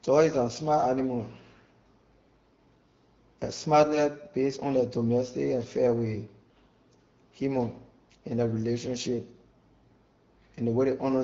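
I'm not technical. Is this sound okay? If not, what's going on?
Yes, this sound is okay, and nothing is going wrong in it.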